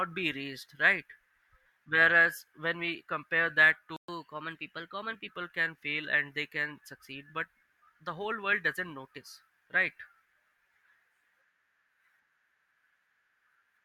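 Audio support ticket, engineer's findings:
Playback stall, 3.96–4.08 s: player likely starved of data or its thread blocked. Output drops to silence for 120 ms mid-speech, then resumes where it stopped.

Catch-up at higher speed, 4.08–5.28 s: player resamples its backlog at 1.1x to recover lost time. Speech runs fast, pitch up about one and a half semitones, then normal.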